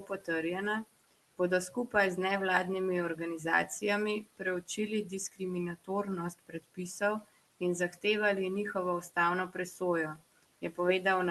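Noise suppressor artifacts run through the whole clip: the suppressor pulls down whatever it judges to be steady room noise by about 18 dB, so the background sinks between phrases and returns under them. Unlike plain room noise, which is present here about 20 dB below the speech, this pumping follows the speech.

Speech cut by the noise suppressor occurs at 0.00–0.28 s (about 13 dB), 4.24–5.41 s (about 17 dB), 6.39–7.24 s (about 18 dB) and 10.16–10.78 s (about 17 dB). Within each span, brief stretches adding up to a fraction of a second are treated as noise, leaving soft consonants and word endings faint or swallowed. A packet dropout would leave an abrupt gap or glitch, but here the speech fades with the background, and the top end stops near 12 kHz as the Opus call path narrows it.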